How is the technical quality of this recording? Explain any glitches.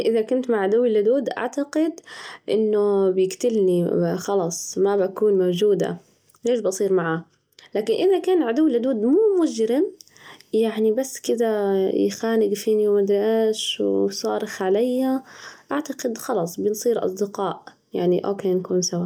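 No technical faults can be heard anywhere in the recording, so there are no glitches to explain.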